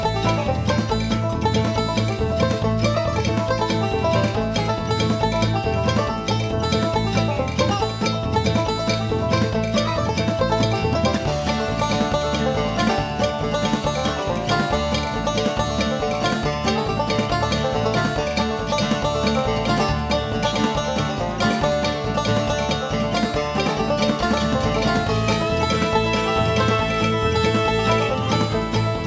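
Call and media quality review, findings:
No findings for this call and media quality review; the sound passes through normal call microphone processing, with nothing above 8 kHz.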